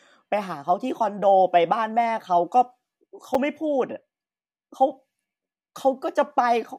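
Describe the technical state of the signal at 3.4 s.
At 3.35 s a gap between stream segments interrupts the speech. The time stamps of adjacent 4-second segments leave about 6 ms uncovered, and the player fills that hole with silence. The result is a brief, hard-edged dropout with no audio lost.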